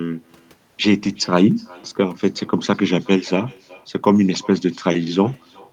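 A faint, thin copy of the speech trails each phrase by roughly four tenths of a second for the whole clip. It sits about 28 dB below the direct sound, so it reads as a ghostly shadow rather than a distinct repeat. This is echo with no canceller: the far end plays the call through a loudspeaker, its microphone picks that playback up again, and nothing subtracts it. The talker's own speech therefore returns after the network round trip.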